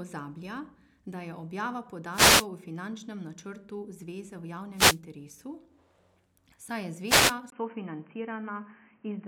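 Wireless microphone noise hits occur at 2.11 to 2.47 s, 4.73 to 5.00 s and 7.05 to 7.36 s in this speech recording, heard as bursts of static where the FM radio link fades and receiver noise swells over the voice. At 7.50 s the input switches to a poorer device: after a 20 ms gap the sound turns dull, with nothing above 3.1 kHz and a faint new noise floor, at a similar level. This is likely a switch to a headset or call-profile microphone.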